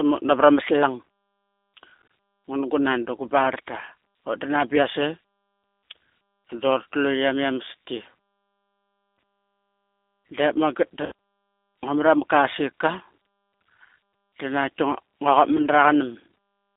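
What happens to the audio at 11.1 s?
Around 11.06 to 11.12 s there's VoIP packet loss concealed by the speech codec. About 60 ms went missing, which fits three lost packets. The decoder kept repeating its last pitch and filter at a falling gain, so the sound smears into a buzzy tone or coloured noise that fades. It stays weak or distorted just after.

The G.729 codec runs underneath all of it. At 8 kbit/s the audio is rebuilt from a vocal tract model plus a few pulses per frame. The line band is roughly 250 Hz to 3.6 kHz, and the result is plainly rough and synthetic.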